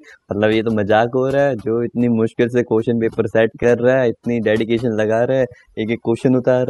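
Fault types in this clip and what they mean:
Overdone noise removal: the denoiser's pushed way too hard across the whole clip, so the gaps go near silent with twinkly specks.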